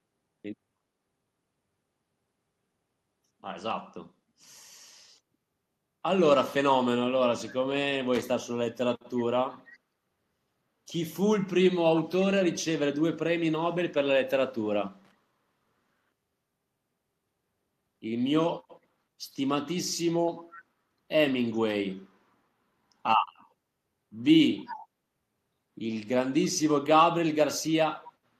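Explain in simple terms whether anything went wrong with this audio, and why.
Two kinds of problems can be heard in this speech. There is loose connector crackle from 8.15 to 8.23 s and from 15.05 to 15.11 s. These are short bursts of scratchy crackle. A worn or dirty plug contact is briefly losing and regaining connection, chopping the sound.

There is also echo leak at 9.73 to 9.78 s, 11.95 to 12.02 s, 24.65 to 24.87 s and 28.02 to 28.08 s. A faint repeat of the voice arrives about 0.31 s late. It is barely there at 9.7 s and clearer at 12.0 and 24.7 s. The likely cause is a speakerphone at the far end whose echo removal missed some of the sound.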